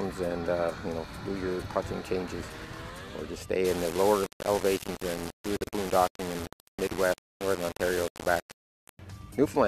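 From 3.65 s to 8.99 s the audio turns grainy, with distortion that tracks the signal and quiet passages breaking up, the error sitting only about 10 dB below the sound. This is low bit depth without dither, likely rounding to around 4 bits.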